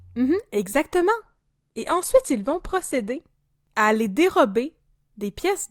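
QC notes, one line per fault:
1.19–3.19 s, adaptive stream at a lower bitrate: for about two seconds the sound suddenly goes thin, with nothing above 12.3 kHz and more codec smearing, then snaps back to full quality right before "à les". There's no dropout at either edge, just an abrupt switch, which fits the player falling from a 64 kbit/s Opus stream to a 16 kbit/s one while the connection struggled, then stepping back up.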